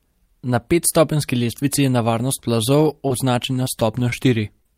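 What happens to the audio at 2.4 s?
At 2.41 to 2.45 s there's a short concealed packet loss: about 20 ms of speech arrived too late, and the decoder extended the previous sound to cover it, leaving a quick smear.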